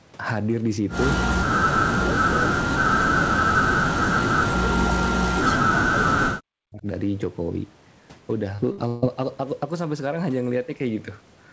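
From 1.81 to 4.33 s, again from 4.78 to 6.42 s, and briefly from 6.61 to 6.86 s, the speech gets pushed way down, at its deepest by something like 40 dB, so it thins out and drops away in chunks. That pattern is most likely speech suppressed in double talk: the far end was talking at the same time, the echo canceller couldn't tell the near talker apart from its own loudspeaker echo, and it squashed both.

Then there's a cluster of network trouble. At 8.56 s there's a short concealed packet loss, about 20 ms where nothing arrived. The decoder papered over it by carrying the previous sound forward and blending back in, so you only get a tiny smear or wobble.

Right after that come two bursts of packet loss. The first runs from 8.72 to 8.80 s and is 60 ms long. The second runs from 8.88 to 9.04 s and is about 140 ms. In each one the receiver stretched out the last sound and faded it, so voiced parts turn into a held buzz and the rest into a dying hiss. 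The audio then picks up further along with that stretch simply gone.

Throughout, nothing sits above 8 kHz. That's the normal top end of a G.722 wideband call, not a fault.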